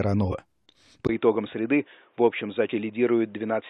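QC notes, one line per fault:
0.28–0.33 s and 2.67–2.72 s, damaged data in a compressed stream: brief glitches as the decoder loses frame sync.
1.07 s to end, input switched to a poorer device: after a 20 ms gap the sound turns dull, with nothing above 3.8 kHz, about 5 dB quieter and with new background noise roughly 40 dB down. This is likely a change to a narrower-band input device; the different noise floor and the gap distinguish it from added filtering.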